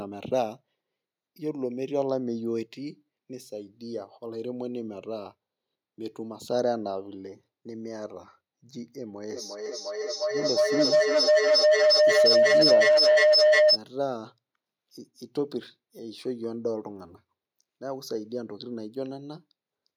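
Feedback howl runs from 9.28 to 13.81 s. A second device in the same room was evidently on the call, so the microphone picked up its loudspeaker's output and sent it around again, gaining level on each pass. Instead of dying away, the repeats narrowed to a tone near 700 Hz. The tone pulses roughly every 0.4 s, the loop's delay, and peaks about 10 dB above the speech before the loop is broken.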